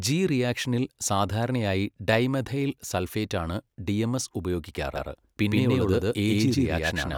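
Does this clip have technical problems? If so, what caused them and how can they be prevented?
Yes. A doubled audio track starts abruptly at 4.96 s and lasts to the end. An equally loud copy trails by about 150 ms, likely from a second, slower capture path. Prevent it by routing each source through only one recording path.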